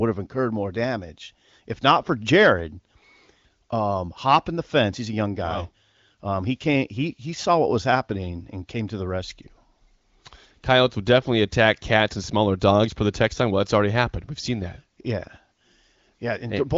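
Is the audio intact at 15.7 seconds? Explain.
Yes, the audio is intact at 15.7 seconds, with no fault at that moment.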